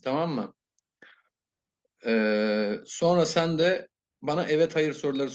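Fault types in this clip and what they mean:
No faults can be heard.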